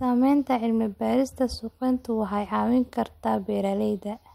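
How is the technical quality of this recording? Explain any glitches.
The recording has no audible technical glitches. There is nothing to explain, because no disturbance stands out anywhere in the speech.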